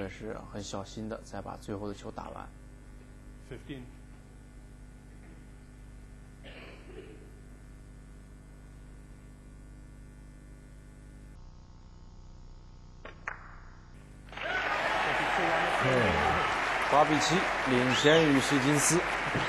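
From 11.35 to 13.94 s the audio drops into a section at the wrong speed, running at about 0.61 times its proper rate, so everything in that stretch turns slow and deep, falling by close to ten semitones, before snapping back. The likely cause is a player or editor treating that part with the wrong clock. Pitch and tempo sink together, which separates it from a pitch shift or time-stretch, where one moves without the other.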